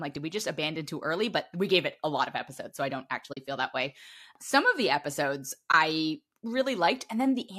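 At 3.33 to 3.37 s, a short stretch of AAC frames went missing and the decoder muted them by zeroing their spectrum. This is AAC frame loss with muting. The 40 ms gap fits about four 10 ms frames and sounds like a soft-edged hole in the speech, faded out and back in by the overlapping windows. A second loss at 5.72 to 5.74 s removes 20 ms, likely two frames from the low-delay AAC stream, and sounds like a brief dip.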